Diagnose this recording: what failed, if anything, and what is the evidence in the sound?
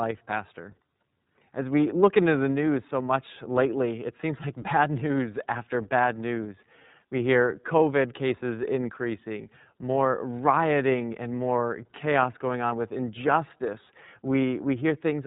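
The failure sits at the codec stage: the speech has passed through the iLBC codec for its whole length. Nothing above 3.8 kHz survives, and the voice carries a plainly audible rough, synthetic edge from start to finish. iLBC codes each frame's excitation independently of the previous one, so small discontinuities at every frame boundary add that grain. The texture fits the 30 ms frame mode running at about 13.3 kbps.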